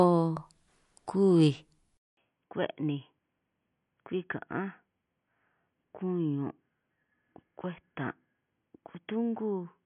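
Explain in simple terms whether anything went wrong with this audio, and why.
Throughout the whole clip the speech has a plainly watery, swirly quality, and the crisp top end of s sounds and breaths is missing, with nothing at all above about 11.3 kHz. That points to MP3 compression, likely at a low quality setting. To save space, the encoder throws away the highest treble and drops quiet details that then flicker in and out from moment to moment, which is what gives the sound that wobbly, underwater character.

At 1.97 s the sound cuts out for a fifth of a second. When it returns, the speech is noticeably quieter, dull and boxy, like a cheap phone line, with nothing above about 3.3 kHz and a faint new layer of background noise. It stays that way to the end. This is most likely an input switched to a poorer device, such as the recording jumping from a good microphone to a headset or a weaker built-in mic, which carries a much narrower range of sound.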